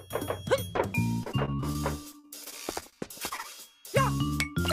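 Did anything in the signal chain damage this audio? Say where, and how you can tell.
Yes: repeated packet loss (robotic sound) at the network stage, from 1.23 to 1.80 s and again from 2.12 to 3.46 s. Short holes of up to 40 ms keep recurring, and each is patched by extending the preceding sound, so the audio turns choppy with pieces missing.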